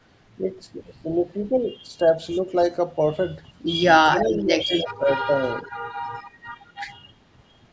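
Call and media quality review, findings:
Speech suppressed in double talk: level dips at 4.05–4.75 s (up to about 10 dB), 4.97–5.08 s (about 20 dB), 6.76–6.88 s (about 30 dB). Likely echo canceller ducking the near talker during overlap. Dips track the far side, unlike packet loss gaps.

Echo leak: delayed copy of the voice, 4.14–4.9 s (fairly strong) and 5.39–5.71 s (faint), lagging by about 0.3 s. Likely residual loudspeaker echo passing the far-end canceller. Its fixed delay distinguishes it from room reverb.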